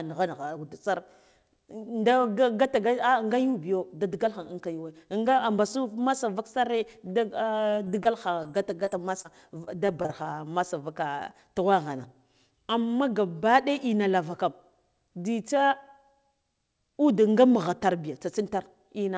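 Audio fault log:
7.70–8.07 s, repeated packet loss (robotic sound): four gaps arrive in quick succession within less than 0.4 s, the longest 29 ms. About 40 ms of real speech never arrived, and 81 ms was filled by extending the last received sound, so 22% of the stretch is concealment. Because each patch repeats the previous waveform and the next loss follows almost immediately, the speech turns choppy.
8.43–9.26 s, scattered short gaps: around four isolated losses are spread across this stretch, none longer than roughly 15 ms, with around 50 ms synthesised in total, only about 7% of the span. The receiver bridged each small hole by continuing the preceding sound. This cost 60 ms of speech and added 13 ms, which slightly shifts the timing. The result is brief ticks and small smears rather than sustained distortion, since the gaps are too far apart to merge.
9.64–10.27 s, repeated packet loss (robotic sound): a second dense burst of five gaps, the longest 26 ms. 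Here 100 ms of speech is missing and 103 ms was filled with extrapolated sound, covering 16% of the stretch. The repeated patching produces the same choppy texture as the earlier burst. The G.722 call path carries nothing above 8 kHz.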